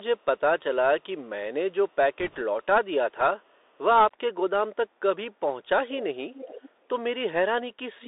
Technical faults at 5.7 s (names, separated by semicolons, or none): Bluetooth CVSD headset codec